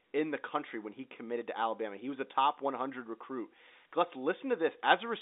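No technical faults are present.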